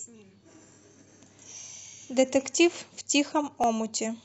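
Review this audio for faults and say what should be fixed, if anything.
A single sharp click at 3.64 s points to dropped samples. Less than a millisecond of the speech stream is likely missing, so the waveform jumps abruptly to a later value. No sound is lost. Prevent it by keeping the capture and processing path free of buffer underruns.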